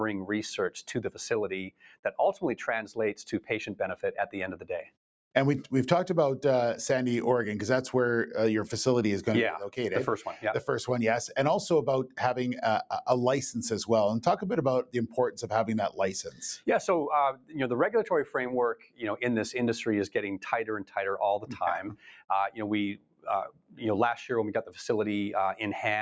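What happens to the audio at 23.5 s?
Right there, from 23.48 to 23.81 s, you get sound cut by the noise suppressor. For roughly a third of a second the suppressor decides the material is noise and pulls it down hard, by about 18 dB at the deepest point. It hits whatever's sustained or fading, so that stretch sinks and its tail gets chopped short, while any sharp onset pokes through. It sounds like the audio briefly ducks out before recovering.

That dip sits on top of a broader problem: a noise suppressor built for speech applied to music or sounds, running the whole time. It keeps misreading steady tones, ambience and reverb as noise, so the gain swings by around 10 dB as it clamps and releases. Around 23.5 s that shows up as the same pumping, fluttery, thinned-out character, with held parts sagging and transients left standing.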